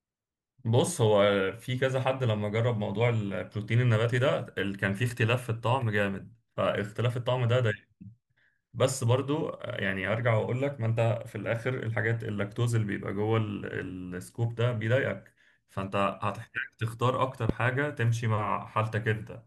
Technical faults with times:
17.49-17.52 loud pop

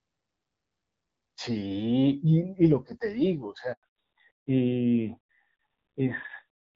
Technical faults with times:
3.73-3.83 handover gap
3.83-6.75 fallback to narrowband

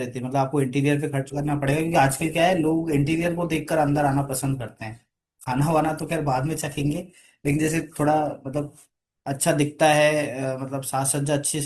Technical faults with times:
1.27-9.27 adaptive stream at a lower bitrate

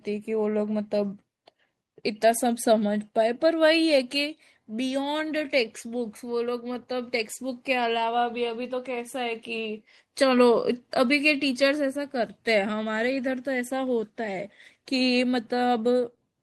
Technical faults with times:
none

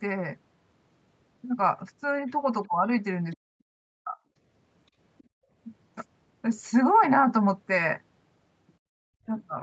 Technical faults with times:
2.67-2.86 speech suppressed in double talk
3.32-3.36 other side's voice leaking through
3.38-4.17 speech suppressed in double talk
5.18-5.23 other side's voice leaking through
5.23-5.51 background gated by the echo canceller
8.79-8.93 background gated by the echo canceller
9.21-9.30 speech suppressed in double talk

